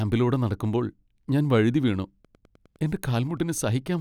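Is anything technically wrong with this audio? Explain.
Yes. From 2.18 s, just after "നടക്കുമ്പോൾ ഞാൻ വഴുതിവീണു", to the end, there is Wi-Fi interference. The circuit rectifies a nearby radio's beacon, producing faint ticks every 102.4 ms. This steady, roughly ten-per-second regularity distinguishes it from random crackle.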